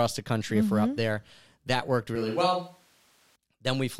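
From 2.16 to 3.36 s the speech turns roomy and hollow, with thinner bass and a faint background floor roughly 35 dB below the voice, likely a switch to a distant microphone. The level barely changes, so the waveform stays even, but the spectrogram loses low-end energy and shows smeared reverberant tails.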